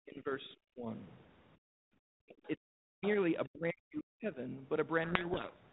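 Speech with repeated stretches of speech suppressed in double talk, at 0 to 0.87 s, 2.09 to 3.03 s and 3.48 to 4.4 s. In each stretch the talker dips hard, by roughly 40 dB at the deepest. This is likely the echo canceller turning the line down while the far side was also speaking.

From 1.57 to 1.81 s the background is gated by the echo canceller: the room sound drops by about 34 dB for roughly 0.2 s and then returns. Only the ambience is pulled down here, during loudspeaker playback, whereas the double-talk stretches suppress the talker's own voice.

Brief scraps of the other side's voice leak through at 2.45 to 2.49 s, very faint at roughly 30 dB under the speech, and at 3.03 to 3.09 s, stronger at roughly 15 dB under. This is likely residual echo that the canceller failed to remove. It is a second, separate voice rather than a smear of the talker's own sound, and the louder scrap arrives just as the second suppressed stretch ends.

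From 5.04 s to the end at about 5.72 s, a codec payload misread buries the speech in harsh, grinding distortion. The bit order of the G.726 code words is reversed between sender and receiver, so the decoder builds its adaptive prediction from wrong values. The ordinary 32 kbit/s G.726 coding noise stays light and follows the speech level, while this distortion swamps the speech outright and does not ease until the clip ends.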